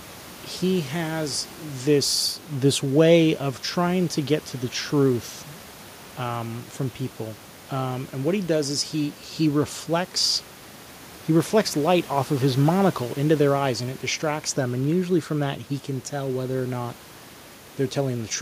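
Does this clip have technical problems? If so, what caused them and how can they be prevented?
No technical faults in this speech recording; the only background is the room's own noise, sitting about 25 dB below the speech and captured by the microphone rather than added by the system.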